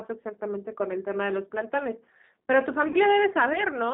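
Throughout, the speech carries G.729 codec damage: a rough, slightly synthetic texture squeezed into roughly 200 Hz to 3.7 kHz, which fits an 8 kbit/s G.729A coder, unlike plain band-limiting, which stays smooth. From 2.88 to 2.97 s, packet loss concealed by the speech codec stretches the last sound into a fading buzzy tone or coloured noise, about 60 ms of loss that points to two packets, and the voice stays weak or distorted afterwards rather than cutting to silence.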